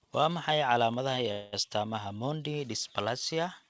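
From 1.32 to 1.54 s the speech stops moving forward and a fading buzz stands in for about 0.21 s before the sound resumes exactly where it broke off, so nothing is lost and the rest of the clip runs about 0.21 s late. This is a call audio freeze, likely packets held up in transit until the jitter buffer ran dry and the receiver stretched its last sound. On a spectrogram the frames repeat as flat horizontal smears that dim out, and the waveform shows a decaying, repetitive stretch. The band-limit from the call path, with nothing above 8 kHz, fits G.722 and is visible throughout.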